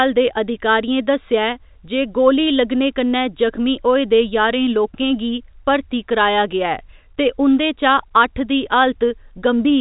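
Nothing here needs flagging: it's a speech recording carried over ordinary G.711 telephone coding, so the sound stops around 3.8 kHz and there's only the faint, level-following grain that format always brings.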